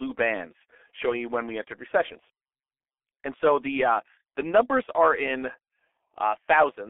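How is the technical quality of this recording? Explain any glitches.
Technical quality is poor. Throughout, the speech sounds muffled, hoarse and smeared, with consonants blurred together. This is heavy G.723.1 codec damage: the sound is confined to roughly 300 Hz to 3.4 kHz, and a coarse voice model updated every 30 ms, at a rate that fits about 6.3 kbit/s, loses fine detail.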